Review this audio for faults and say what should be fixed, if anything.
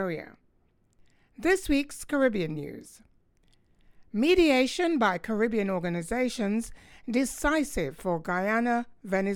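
No faults turn up in this audio, so nothing needs to be fixed.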